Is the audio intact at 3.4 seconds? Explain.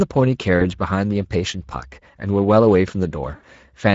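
No. From 3.35 to 3.46 s there is VoIP packet loss concealed by the speech codec. About 80 ms of audio went missing, which fits four lost 20 ms frames. The decoder extended its last pitch and filter while lowering the gain. The sound smears into a fading buzzy tone or coloured noise and stays weak just after.

The Speex codec also colours this moment, as it does the whole clip. The coding damage, which fits a middle setting around 16.8 kbps, is plainly audible.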